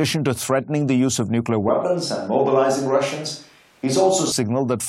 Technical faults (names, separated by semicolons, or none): switch to a distant microphone